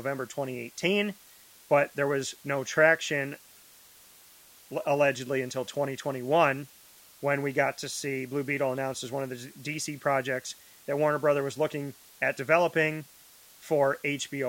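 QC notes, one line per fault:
Throughout: low bit depth with dither. The speech has been reduced to 8 bits, with dither added before rounding. The coarse steps would otherwise cause distortion that follows the signal. The dither breaks the error up into a steady, even white-noise hiss instead. That hiss sits about 25 dB below the speech. It is constant between phrases as well as under them, because the dither noise does not depend on what the signal is doing.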